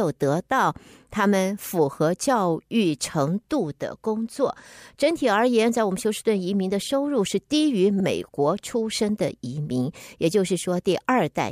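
At about 8.00 s the speech stutters: a short slice, roughly 52 ms long, plays and then plays again at once. These are repeated frames. A block of compressed audio, which fits two frames, was written twice, so the decoder replays it and the clip grows by 52 ms.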